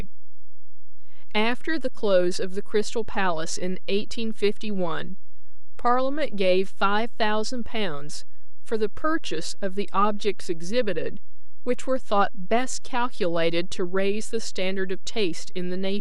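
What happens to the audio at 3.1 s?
At 3.1 s the speech carries a DC offset that runs through the whole clip: a constant of about -19 dBFS displaces the waveform from the zero line. It is inaudible, but eats headroom, and a spectrogram shows a steady band at 0 Hz.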